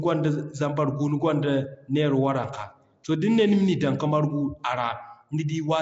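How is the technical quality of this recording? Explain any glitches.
The recording has one audible flaw that runs through the whole clip: Nellymoser compression damage. The speech was likely squeezed through Flash's Nellymoser Asao codec, at a rate that fits about 32 kbps, coding short blocks with too few bits, so quiet bands get filled with noise and nothing survives above 7.7 kHz. The result is a dull top, a rough hissy halo and a smeared, underwater quality.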